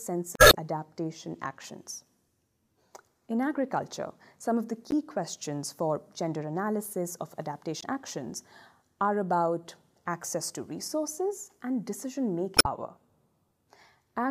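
The audio has four short bursts of damaged data in a compressed stream, at 0.35–0.55 s, 4.91–4.94 s, 7.79–7.84 s and 12.55–12.66 s. Corrupted bytes make the decoder misread those frames and lose sync until it finds a valid frame header again, producing brief chirps, squawks, clicks or short holes.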